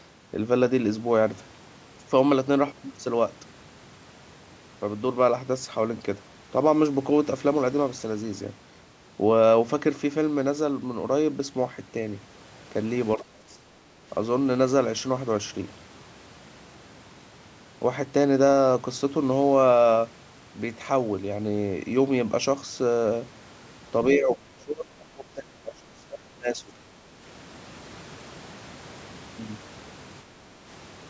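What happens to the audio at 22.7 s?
At 22.7 s the speech runs through intact, with no dropout, click or distortion, only the usual bass roll-off and band limit of the call microphone processing.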